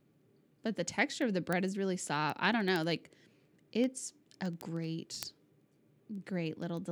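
From about 0.14 s right through to 6.85 s, the speech carries word clock ticks, a steady run of sharp clicks of uneven strength, roughly one every 70 ms, so around a hundred in all. What's going on is that the receiving device is running on its own clock rather than locking to the digital link's, so the two drift apart and a single sample gets dropped or doubled at each slip. That tick rate points to the clocks being off by a few hundred ppm.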